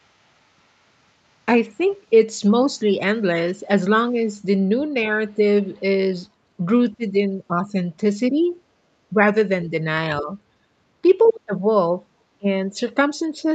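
At 1.69 to 1.82 s, the echo canceller likely heard both sides talking at once and treated the talker's speech as echo. It turned the speech down by a few decibels, a brief dip that marks speech suppressed in double talk. Just after, at 1.92 to 1.96 s, there is a faint scrap of the other side's voice leaking through, far below the speech. It is likely loudspeaker sound the canceller failed to remove. The same suppression, likely from the same double talk, dips the speech again at 4.12 to 4.16 s.

From 6.93 to 9.15 s, the ducking, likely also from double talk, is heavier. It reaches about 15 dB at its worst, and the voice sinks in patches across that stretch. At 10.21 to 10.31 s, a shorter drop of about 10 dB, likely the same double-talk suppression, follows. At 11.24 to 11.33 s, the other side leaks through again, now much clearer at about 20 dB under the speech, likely because the canceller again missed the loudspeaker sound. 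From 11.31 s to the end, the suppression, likely triggered by that overlap, deepens to about 20 dB. The voice fades and breaks up while the far side talks, and the whole clip is band-limited to 8 kHz, as the normal call processing leaves it.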